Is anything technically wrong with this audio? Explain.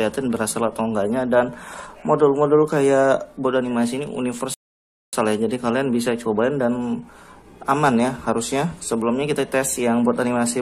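Yes. A rebuffering stall runs from 4.54 to 5.13 s: the player exhausted its downloaded audio and paused until more data arrived. The sound breaks off into silence for 589 ms, then picks up at exactly the point where it stopped. That distinguishes it from a dropout, where a piece of the audio is skipped and never heard. Nothing is missing here; the stall only adds time to the playback.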